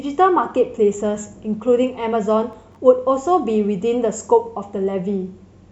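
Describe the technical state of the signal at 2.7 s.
At 2.7 s the signal is inside a burst of processor overload crackle running from 2.53 to 2.76 s. The processor misses several deadlines for very short buffers, under a millisecond each, and each miss drops to silence with hard edges, giving a gritty crackle over the speech.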